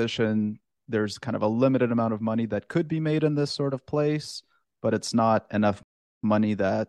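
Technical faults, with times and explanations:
5.83–6.24 s, rebuffering stall: the player ran out of buffered audio, adding 0.40 s of flat waveform and blank spectrogram before speech resumes seamlessly.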